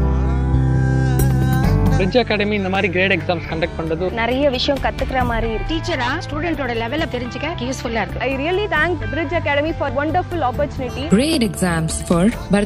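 Repeated buffer faults at 2.75 s and from 11.33 to 11.36 s. A roughly 11.6 ms segment (consistent with a 512-sample buffer) replays once, then twice, giving brief clicky stutters without losing audio.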